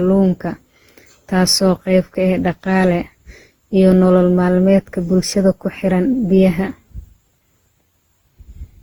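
Speech with generation loss throughout: the sound is swirly, smeared and hollow beyond what its bitrate suggests, with blurred consonant attacks and content reaching about 20.2 kHz. This likely comes from roughly ten successive lossy passes, consistent with repeated Opus encoding near 48 kbit/s.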